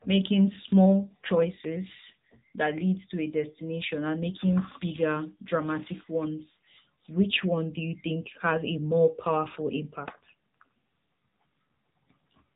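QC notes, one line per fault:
Throughout, AMR narrowband mobile codec: the speech is band-limited with nothing above 3.8 kHz, and coding damage is plainly audible. The codec rebuilds the speech from a vocal-tract model and sparse pulses in 20 ms frames, and the damage points to a mode near 8 kbps.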